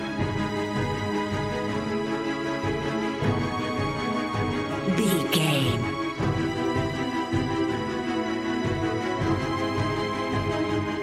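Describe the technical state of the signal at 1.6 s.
At 1.6 s the signal is intact, with no fault present at that moment.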